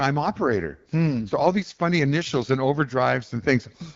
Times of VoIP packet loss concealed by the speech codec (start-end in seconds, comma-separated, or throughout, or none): none